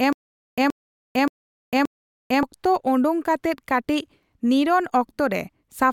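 Speech, opening with a stutter with silent gaps that is already under way when the clip begins and runs to about 2.43 s. A 126 ms fragment plays four times, each followed by about 450 ms of digital silence, so the burst returns every 576 ms. The likely cause is a stalled player or stream replaying its last buffered fragment at each retry. Whatever audio belonged in those gaps is lost. On a waveform this shows as identical short blocks separated by flat silent stretches, and on a spectrogram as repeated matching slivers with fully blank columns between.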